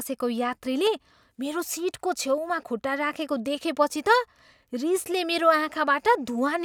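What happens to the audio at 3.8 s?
Nothing goes wrong at 3.8 s: the speech plays through that moment intact, with no dropout, click, distortion or other fault.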